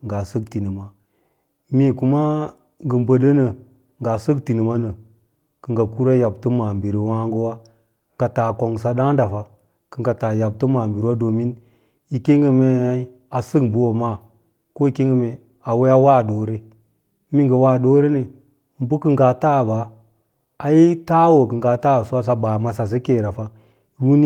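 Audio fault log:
Nothing to log here, as the speech comes across without any technical trouble worth noting.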